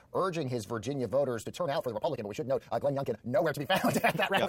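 A time-stretched section runs from 1.39 s to the end of the clip. At that point the speech abruptly jumps to about 1.79 times its earlier pace while the pitch stays where it was, so it sounds rushed rather than higher. This is likely software squeezing the audio to fit a shorter length, dropping short slices of the waveform to gain speed while preserving pitch, which leaves the hurried texture through the rest of the clip.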